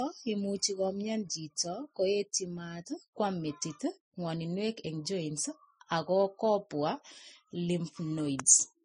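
Throughout the speech, nothing is present above 10.5 kHz, and two different kinds of coding artefact sit on top of each other as grainy, smeared high-frequency texture. This is transcoding between lossy codecs, likely a low-rate MP3 re-encoded as low-rate Vorbis, which compounds the damage.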